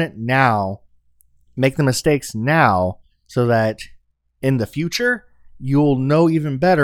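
Nothing stood out as a technical fault when listening to this speech recording.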